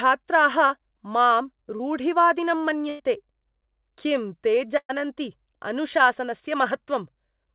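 At 1.76 to 1.81 s, a short concealed packet loss leaves a brief smear where 40 ms went missing. The receiver extended the previous sound for about 33 ms, seen as a smooth, repeated patch. Bursts of packet loss follow at 2.89 to 3.01 s, where 100 ms is missing, and at 4.77 to 4.91 s, where 120 ms is missing. Each is a fading held buzz or hiss: decaying, copied harmonics on the spectrogram, and at 4.91 s it ends in 50 ms of flat waveform before the speech resumes further on. Throughout, the spectrogram is empty above 4 kHz, which fits a G.711 mu-law call path.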